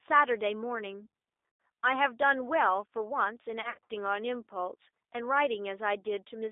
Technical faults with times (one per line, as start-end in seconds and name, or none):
0.00-6.51 G.729 codec
1.49-1.59 VoIP packet loss concealed by the speech codec
3.62-3.91 VoIP packet loss concealed by the speech codec